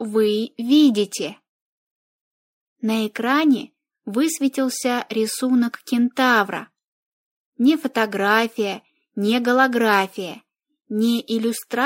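No technical faults can be heard anywhere in the recording.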